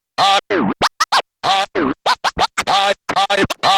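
From 1.41 s to the end, a call bitrate drop sets in: the encoder is starved of bits, which fits a fall from 128 kbps to about 12 kbps, so the sound turns coarse, watery and dulled in the highs. Unlike packet loss, there are no gaps or dropouts; the degradation is continuous.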